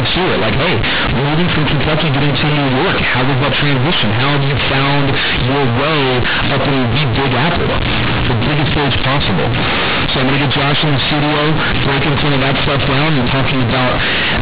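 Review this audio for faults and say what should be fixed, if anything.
The A-law G.711 bytes were played as linear 8-bit samples without expansion throughout, so companded audio read as linear turns the whole clip into loud, buzzy distortion with heavy noise in pauses. Decode A-law to linear PCM before playback.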